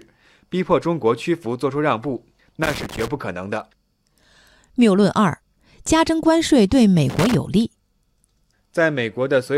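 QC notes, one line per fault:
2.63–3.08 s and 7.10–7.35 s: loose connector crackle. Two irregular bursts of scratchy crackle cut into the speech. A worn or dirty contact is rapidly making and breaking, chopping the signal on and off, and any DC on the line adds pops.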